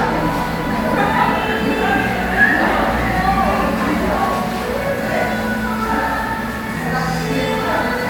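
No technical faults can be heard anywhere in this recording of sounds. There is no moment in it that needs to be flagged.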